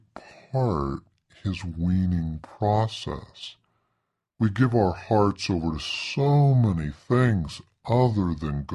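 From start to finish, a wrong sample rate slows the speech to 0.73 times speed and drops pitch 5.55 semitones, which fits 44.1 kHz audio played at 32 kHz.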